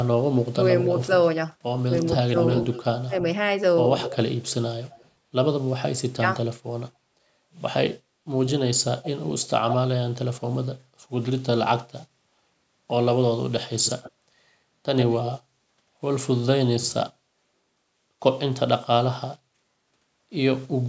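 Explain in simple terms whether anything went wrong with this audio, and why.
Two things went wrong on the call. The likely cause of the first is speech suppressed in double talk: when both sides spoke at once, the echo canceller couldn't tell this talker from the loudspeaker echo and turned everything down. The speech briefly dips or cuts out at 0.5 s, 1.86 to 3.14 s, and 6.07 to 6.26 s.

The second is likely an echo leak: one side's echo canceller didn't fully remove what its microphone caught from its loudspeaker. A fainter delayed copy of the speech trails behind at 0.84 to 1.07 s, 2.05 to 2.84 s, 4.0 to 5.09 s, 8.48 to 9.76 s, and 13.6 to 15.28 s. The delay is about 0.19 s at first and shortens to about 0.11 s by the end.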